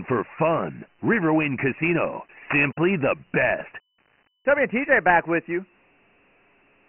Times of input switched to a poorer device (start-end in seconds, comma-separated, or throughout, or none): none